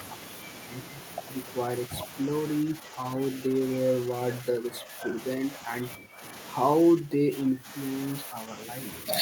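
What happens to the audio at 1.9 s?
From 1.86 to 1.9 s the speech dips by roughly 5 dB, likely speech suppressed in double talk, as an echo canceller turns down both sides at once. It sounds like a brief duck, seen as a narrow notch in the waveform envelope and fainter spectrogram energy.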